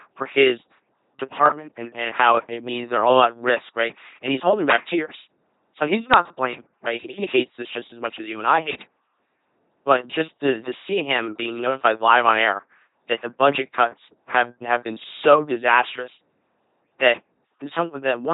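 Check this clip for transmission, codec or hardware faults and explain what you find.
There is one codec fault, and it lasts the whole clip. An LPC-10 vocoder rebuilds speech from a ten-pole filter driven by either pulses or noise, consistent with 2.4 kbit/s. The result is a heavily buzzing, mechanical voice with nothing above 3.8 kHz.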